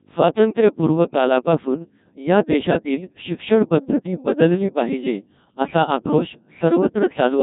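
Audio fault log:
Throughout, Codec 2 vocoder: the speech sounds robotic and buzzy, heavily damaged, with nothing above about 3.8 kHz. The voice is rebuilt from sine waves using only pitch, voicing, energy and a spectral envelope, so the original waveform is lost, which fits a rate near 1.6 kbit/s.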